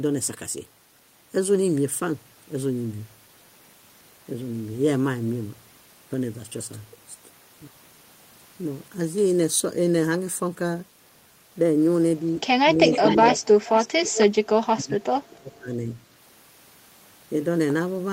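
From 12.75 to 13.2 s the speech dips by around 10 dB for about a fifth of a second in total. This is speech suppressed in double talk: with both ends talking, the echo canceller likely mistook this talker for returning echo and turned the level down. What marks it out is that the voice itself loses strength and nothing is added.

An echo leak overlaps it from 12.91 to 13.47 s and returns from 13.63 to 14.26 s. A copy of the voice trails about 0.4 s behind, about 10 dB below the direct speech. That copy is likely loudspeaker sound the far end's canceller failed to remove before sending it back. Unlike suppression, this adds a second, delayed layer rather than taking level away, and its fixed lag keeps it separate from room reverberation.

From 14.43 to 15.89 s the suppression comes back much harder. The speech drops by about 35 dB for roughly a second in total. This is far deeper than the earlier dip.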